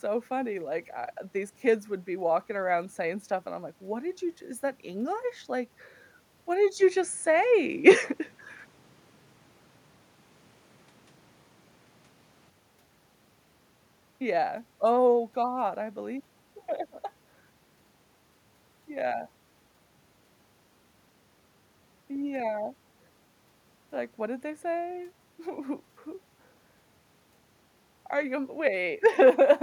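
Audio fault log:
6.77 to 12.50 s, input switched to a poorer device: the speech abruptly narrows in band and turns duller, shifts by about 5 dB in level and gains a faint new noise floor, with no gap at either change. This is likely a move to a narrower-band microphone and back.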